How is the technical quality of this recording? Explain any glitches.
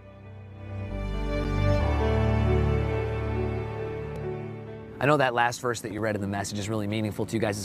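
Three short dropouts mar the recording, each a block of digital silence, at 1.44 s, 4.16 s and 5.98 s. The program likely failed to fill its output buffer in time, so zeros went out instead of audio. The last two gaps each last 2.9 ms, which fits a 128-sample buffer; the first runs 7.4 ms. The sound cuts abruptly to silence and back, so each one is heard as a sharp tick rather than a noticeable hole.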